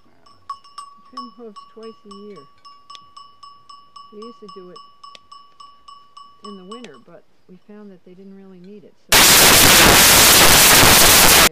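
From 9.12 to 11.47 s the audio turns into loud, harsh broadband noise: samples built from the wrong bytes, low bits misread as high. Unlike ordinary hiss, it swamps everything.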